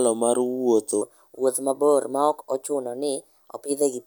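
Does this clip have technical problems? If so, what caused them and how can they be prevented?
Yes. From 1.02 s to the end, this speech has a section at the wrong speed. It runs 1.18 times too fast, so the voice jumps up about three semitones and sounds hurried. The likely cause is playback or resampling against a mismatched clock. Unlike a pitch-shift or time-stretch fault, which changes pitch or tempo on its own, here both change together at one abrupt moment. To prevent it, make sure every device and edit shares one sample-rate setting, and resample properly when rates differ.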